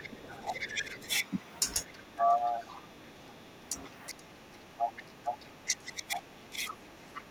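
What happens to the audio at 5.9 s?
At 5.9 s the speech is held down by speech suppressed in double talk. This runs from 1.85 s to the end of the clip. The level dips by up to roughly 20 dB, in pieces, for about four seconds in all. The likely cause is an echo canceller that cannot separate the near talker from loudspeaker echo while both sides speak, so it turns both down.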